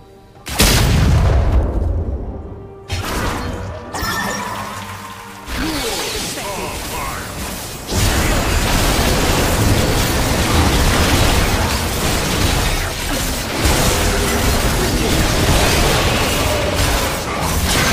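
No technical faults can be heard anywhere in this audio; the signal stays intact and steady throughout.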